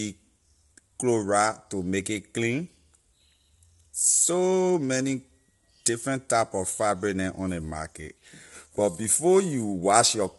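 Throughout, the speech sounds rough and grainy, with nothing above 11.6 kHz, likely low-delay AAC compression at a bitrate that fits about 32 kbps.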